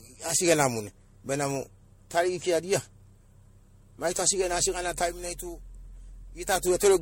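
Generation loss runs through the whole clip, from start to finish. The speech has likely been decoded and re-encoded as MP3 at 64 kbit/s around seven times, each pass requantising on a shifted frame grid so that noise and spectral gaps pile up. Nothing survives above about 16.6 kHz, and the result sounds swirly and hollow, more degraded than a single 64 kbit/s encode would leave it, with consonant attacks smeared and blurred.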